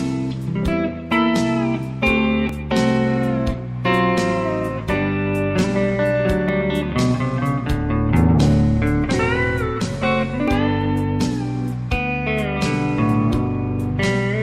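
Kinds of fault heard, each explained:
Overlap between stream segments: overlapping time stamps on 4-second segments made the player discard milliseconds of real audio, leaving tiny skips at 2.49, 6.49 and 10.48 s.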